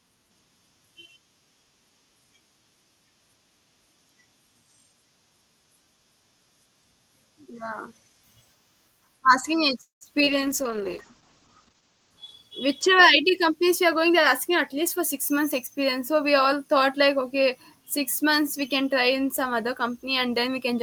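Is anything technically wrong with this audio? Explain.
Yes, there are four faults in this speech clip, all clustered between about 9.8 s and 14.5 s. They are heard through an Opus call path running at 32 kbps with a 12 kHz audio bandwidth.

From 9.81 to 10.03 s there is a call audio freeze. The last sound is stretched into a fading tail that drops to silence for about 140 ms, and then the speech resumes from where it stopped. About 0.2 s of time has been inserted, with nothing lost. The likely cause is packets held up in transit, so the jitter buffer ran dry and the receiver extended the final audio until delivery resumed.

At 10.25 to 10.29 s comes a short concealed packet loss. Roughly 20 ms of audio never reached the decoder in time. The receiver papered over the hole by extrapolating from the preceding sound and then crossfading back into the real signal. The result is a brief smear or blip rather than a clean gap.

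From 10.31 to 13.19 s there is a call bitrate drop. The bandwidth estimate collapsed, and the encoder was pushed from 32 kbps down to 10 kbps, staying at the bottom for about 1.55 s. At that rate Opus quantises much more coarsely and narrows the audio bandwidth from 12 kHz to 8 kHz. The speech turns dull and rough, with a watery texture, until the rate climbs back.

From 13.23 to 14.49 s there is a jitter buffer speed-up, ending just before "at least for six". The buffer had accumulated more audio than its target, so the receiver trimmed pitch-period-length pieces repeatedly, about 40 ms in total. Playback runs at roughly 103% speed with the pitch unchanged.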